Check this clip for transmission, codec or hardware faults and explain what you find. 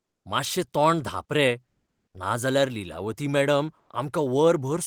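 The clip has one kind of fault, comfort noise in place of the background, heard twice. From 1.66 to 2.14 s, just before "नाजाल्यार लीलावती", the real background drops out for 0.48 s. A steady, featureless hiss replaces it, and its level shifts by about 8 dB. At 3.79 to 3.89 s, a 0.1 s gap gets the same treatment with no level change. The sender likely stopped transmitting during pauses (Opus discontinuous transmission), and the receiver filled them with synthetic noise.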